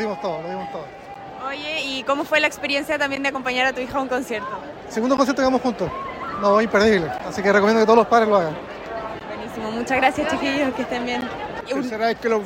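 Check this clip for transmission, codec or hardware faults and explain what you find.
One fault recurs throughout: a gap between chunks at 1.14, 3.16, 5.17, 7.18, 9.20 and 11.21 s. The audio is delivered in 2.0 s chunks, and 13 ms of silence is inserted at each join. No sound is lost, but the flow breaks into brief, hard-edged holes every two seconds.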